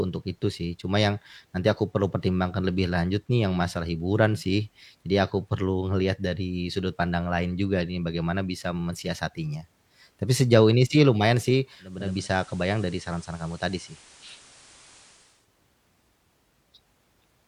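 Digital radio blending to analogue runs from 11.79 to 15.50 s, just after "ini sih lumayan sih". The receiver lost its digital stream and cross-faded over 0.5 s to the FM broadcast. Hiss rises to roughly 25 dB below the speech, with no level jump, before it blends back.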